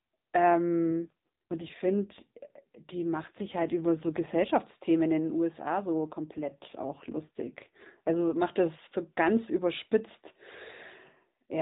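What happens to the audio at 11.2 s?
Nothing goes wrong at 11.2 s: the speech carries on intact through that moment, with no dropout, click or other fault.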